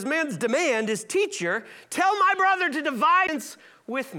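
Speech, with a CD skip at 3.27 s, right after "my brother to". The player drops out for a very brief mute of around 10 ms, heard as a small tick, and the speech resumes from a different point on the disc's spiral after the laser jumped tracks, likely from a knock or a surface flaw. On a waveform this shows as a short flat gap with mismatched edges; a spectrogram shows a thin vertical broadband line and an abrupt break in the speech pattern.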